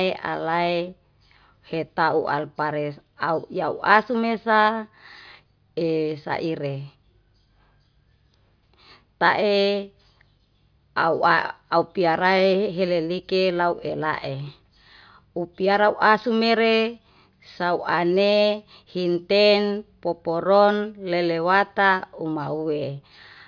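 Nothing in this recording trips the ear as a technical fault; it's just speech running along with no glitch worth pointing out.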